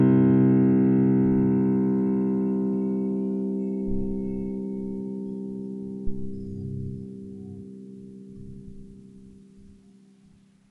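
From the start, the music has no content above 11.3 kHz and plainly audible codec damage: watery, swirling texture, metallic chirps on bright transients, and smeared attacks. This is likely MP3 compression at a low bitrate, around 48 kbps, where the encoder cuts the treble and drops weak spectral lines from frame to frame.

At 6.07 s comes a phantom power thump, lasting until 6.49 s. A supply was switched on or off on a live input, and the voltage step passed through the coupling capacitors as a deep low-frequency thud that decays in about 94 ms.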